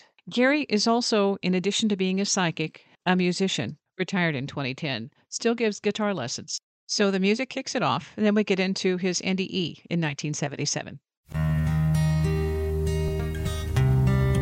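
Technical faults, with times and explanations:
No technical faults can be heard.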